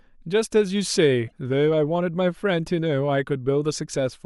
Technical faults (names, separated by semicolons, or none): damaged data in a compressed stream